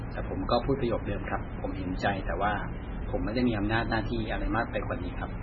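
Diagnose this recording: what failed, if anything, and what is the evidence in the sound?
The codec stage failed: throughout the speech nothing reaches above 6.9 kHz, and what remains swirls and warbles, with metallic chirps on s sounds. This heavy damage is likely MP3 compression near 16 kbps; a simple low-pass filter would remove treble without the swirling.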